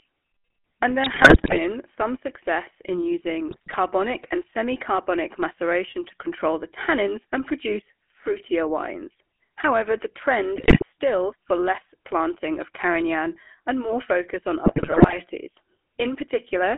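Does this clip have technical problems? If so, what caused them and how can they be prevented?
Yes. The call went through the GSM full-rate codec, whose regular-pulse excitation model (consistent with a 13 kbit/s stream) cannot reproduce natural voicing. The speech throughout sounds buzzy and gravelly, confined to roughly 250 Hz to 3.4 kHz. Routing calls through a wideband codec such as AMR-WB or EVS prevents this.

GSM bit errors on a weak radio link corrupted the decoder's filter, pitch and gain values, with a few percent of bits flipped. The speech breaks into squawks, pops and gargling at 1.04–1.62 s (just before "some success in"), 3.48–3.75 s (just before "and semi carbonic maceration"), 10.56–10.83 s and 14.66–15.17 s (just after "and more focus on"). Better signal coverage and stronger channel coding would prevent it.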